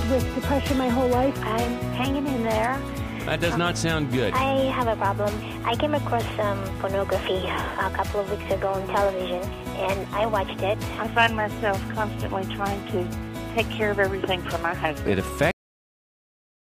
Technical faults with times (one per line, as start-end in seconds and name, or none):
15.51-16.64 cut-off end